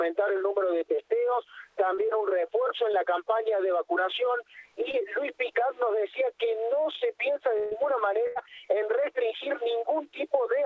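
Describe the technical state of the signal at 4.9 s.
At 4.91 s there is a brief smear or wobble, lasting until about 4.95 s, where the sound seems to stretch for an instant before settling back. This is short concealed packet loss. Roughly 20 ms of the call's audio arrived too late for the decoder, and the receiver bridged the gap by extending the preceding sound, then blended back into the real signal. The surrounding audio stops at 8 kHz, as expected over this call path.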